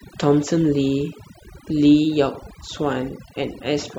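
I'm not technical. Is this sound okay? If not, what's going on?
No. Overdone noise removal runs through the whole clip: the background drops and breaks up into twinkling, warbling specks, and quiet parts of the voice are cut away with it, unlike plain muffling.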